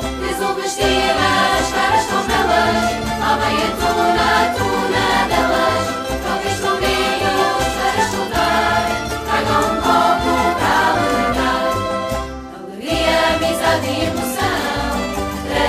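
No technical faults can be heard anywhere in this audio.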